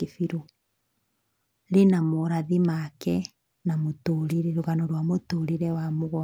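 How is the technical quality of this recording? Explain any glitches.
One glitch stands out in the speech. At 4.29 to 4.33 s, right after "na morathi make na" and before "na rũgano rwa", a brief burst of static swishes over the voice for about 40 ms. This is a wireless microphone noise hit: the analogue FM radio link from the microphone momentarily fades as reflected signals cancel each other, so the receiver's own noise rises and briefly masks the speech.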